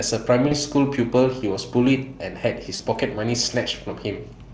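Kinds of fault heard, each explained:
VoIP packet loss concealed by the speech codec: about 40 ms goes missing twice, filled by a fading, buzzy or noisy smear of the preceding sound instead of a silent gap or click.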